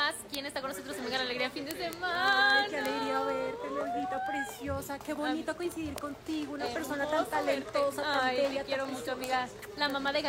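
From 0.13 s to 10.25 s, the audio carries word clock ticks. They are sharp clicks at a steady rate, roughly every 40 ms, so there are around two hundred in all. A receiving device is reading a digital link on its own clock, not locked to the sender. The two clocks differ by something like 500 ppm. Each time they slip past each other, one sample is dropped or repeated, and a tick results.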